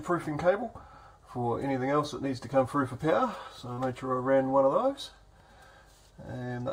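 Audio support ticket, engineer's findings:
Brief smear or wobble at 3.73 to 3.80 s. Short concealed packet loss: 40 ms of audio missed the decoder deadline. Receiver concealment extended the preceding sound across the gap, pitch-based if voiced or as shaped noise if not, then blended back into the real signal.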